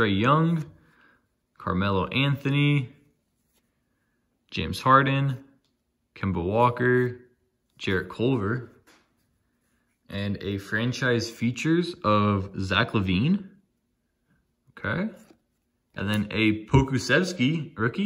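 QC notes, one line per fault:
No technical faults are present in this audio.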